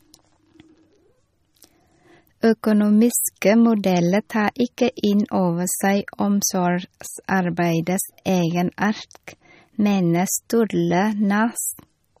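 From start to finish the speech has a watery, swirling texture, with metallic chirps on s sounds and nothing above 15.2 kHz. This is MP3 compression, likely at a low bitrate near 34 kbps, with weak frequency lines flickering between frames and the treble cut.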